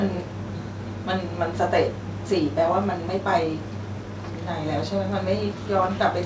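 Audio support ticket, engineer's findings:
No faults found in the speech; the signal has the band limit at 8 kHz expected of a wideband call path, consistent with G.722 at 64 kbps, with no dropouts, glitches or level problems audible.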